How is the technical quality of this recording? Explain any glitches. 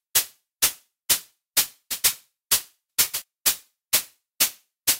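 The recording is marred by a conversion fault that runs through the whole clip.

Crude rate conversion, throughout: the sound points to a 44.1 kHz to 48 kHz change done by simply repeating nearest samples, without filtering. The resulting error sits only around ten decibels below the signal, heard as a gritty, inharmonic fizz tracking loud and bright moments.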